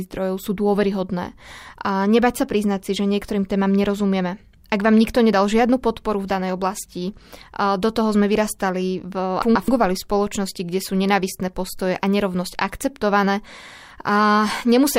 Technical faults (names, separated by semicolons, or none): frames out of order